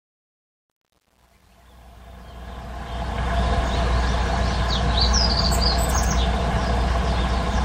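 The opening fade-in, which rises from near the start to full level at 3.44 s, carries truncation distortion on a fade from 0.0 to 3.44 s, worst up to 2.69 s. Its quiet low end turns gritty, which fits undithered quantisation to about 9 bits. Unlike gate chatter, the grit tracks the waveform and eases as the level rises.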